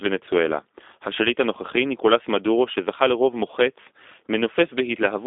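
A G.729 codec, the G.729A low-complexity variant, carried this speech. It rebuilds each 10 ms frame from a vocal tract filter, a pitch predictor and a few pulses, which fits an 8 kbit/s line. The result throughout is plainly rough, synthetic-sounding speech confined to roughly 300 Hz to 3.6 kHz, with nothing above 3.8 kHz.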